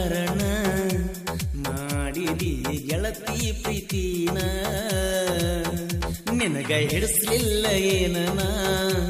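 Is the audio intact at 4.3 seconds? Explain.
Yes, the audio is intact at 4.3 seconds, with no dropout, distortion or other fault at that moment.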